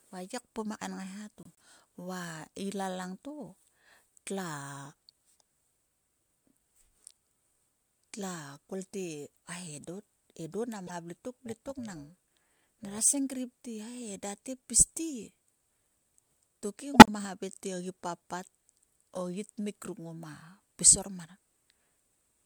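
A speech clip with corrupt frame decoded damage in three places: 1.43 to 1.64 s just before "va ila langto", 10.87 to 10.92 s, and 16.94 to 17.10 s just before "te ogi papt". Each is a short glitch, a chirp, squeak, blip or burst of noise, where damaged compressed frames, several in the first and last cases and a couple at 10.9 s, were decoded with bad codes. From 11.46 to 12.99 s, between "vle tok" and "senkrip te", overlap-add ripple gives a metallic buzz: the reassembled frames' windows don't sum flat, so the level swings by about 6 dB at around 300 Hz.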